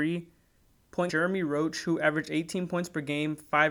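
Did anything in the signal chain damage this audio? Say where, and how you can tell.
Yes: damaged data in a compressed stream at the codec stage, 1.06 to 1.10 s, a brief disturbance where the decoder misread the frames and lost sync.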